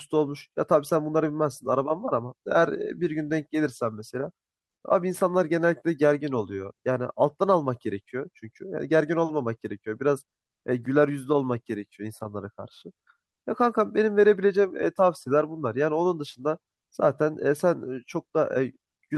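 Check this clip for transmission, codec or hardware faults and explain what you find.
Nothing in the speech signal points to a transmission, codec or hardware problem; its level, continuity and timing hold steady throughout.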